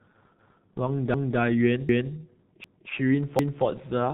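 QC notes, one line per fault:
Throughout: G.723.1 codec. The speech is muffled and hoarse, with nothing above 3.8 kHz and consonants smeared together. The coding damage is heavy. The bitrate sounds like about 6.3 kbit/s, and the codec works in 30 ms frames with a slowly updated voice model. So fast changes in the voice are averaged away. The missing top band takes the crispness out of sibilants and stops. What remains has a rough, buzzy grain.
0.39 s to 3.64 s: overlapping chunks. A 250 ms stretch of speech plays twice at 0.39, 1.14, 1.89, 2.64 and 3.39 s. Each repeat ends 0.25 s later. The joins arrive every 0.75 s, a steady stutter with a click where each restart cuts in. This fits audio handled in 0.5 s chunks, with each new chunk starting a quarter second before the previous one finished. The overlap gets played back rather than discarded.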